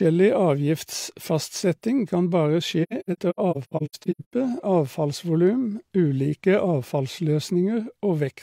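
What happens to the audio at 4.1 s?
At 4.1 s the speech drops out in soft-edged gaps, fading down and back up rather than cutting off. It sits inside a stretch from 2.83 s to 4.33 s where about 0.77 s of sound in total goes missing, scattered across roughly 1.5 s, the longest single gap around a tenth of a second. This is AAC frame loss with muting. The decoder replaced lost frames with silence, and the overlapping transform windows smoothed each hole's edges into short fades.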